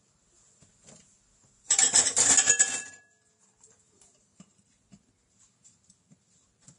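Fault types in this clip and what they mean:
Vorbis compression: The sound is hissy and grainy throughout, with nothing above about 10.6 kHz, and the treble that remains has a coarse, noisy texture. The likely cause is low-bitrate Vorbis coding, which fits a rate of roughly 30 kbps. At that rate the codec cuts the top of the band and quantises the upper residue so coarsely that fine high-frequency detail becomes noise of similar energy, and the damage is plainly audible.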